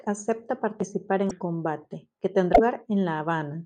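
At 1.29 to 1.31 s and again at 2.53 to 2.60 s the speech jumps forward with a brief glitch. This is likely a broken MP3 bit reservoir: frames, roughly 24 ms each, were lost, so the following frames decoded from the wrong borrowed bytes.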